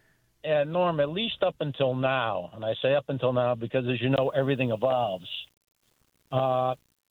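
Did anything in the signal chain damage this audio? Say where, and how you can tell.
Yes. From 4.12 s to the end, quiet sounds turn grainy, with distortion that tracks the signal and sits roughly 40 dB below it. This is low bit depth without dither, likely from a sample-format conversion that rounded to about 9 bits, leaving error correlated with the signal.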